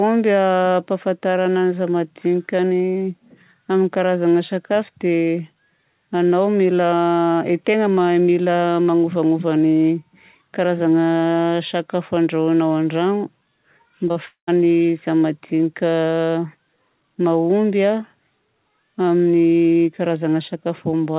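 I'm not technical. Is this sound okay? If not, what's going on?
No, there's a glitch just after the 14-second mark. From 14.08 to 14.18 s you can hear short concealed packet loss: two tiny pieces of the call, about 20 and 40 milliseconds long, arrived too late. The receiver covered the gaps by continuing the last sound, so it briefly smears or wobbles.

Right after that, at 14.26 s, the sound turns into a fading buzz or hiss for about a tenth of a second and then goes silent for about 120 milliseconds. It picks back up at 14.49 s with that bit simply missing. That's likely a long network dropout, where nothing got through for a moment.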